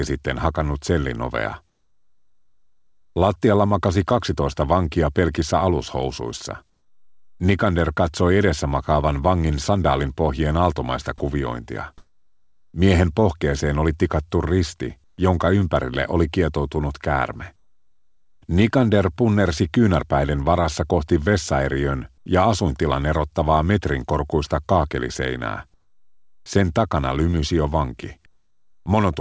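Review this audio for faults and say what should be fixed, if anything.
Discontinuous transmission likely halted the sender during pauses, so the receiver inserted comfort noise in place of the background at 11.98–12.74, 15.04–15.18, 22.18–22.26 and 28.26–28.86 s. The real background becomes a steady, featureless hiss, about 10 dB louder in the first gap and about 4 to 17 dB quieter in the others. Disabling DTX on the call path would keep the real background throughout.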